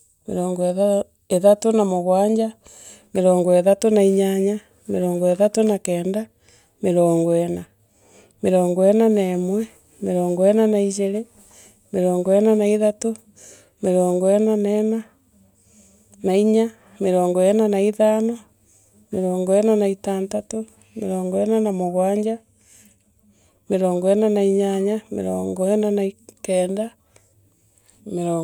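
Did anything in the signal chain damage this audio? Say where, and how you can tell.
No, nothing along the chain seems to have harmed this speech recording, and there's nothing at any point that I'd trace back to a particular stage.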